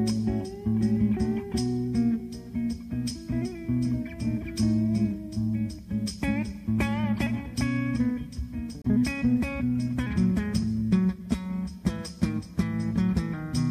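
From 8.82 to 8.86 s the audio skips ahead through a brief garbled stretch, likely a broken MP3 bit reservoir; unlike a plain dropout, material goes missing.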